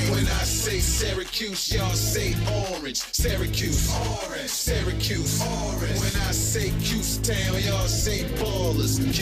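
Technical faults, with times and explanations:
No technical faults detected.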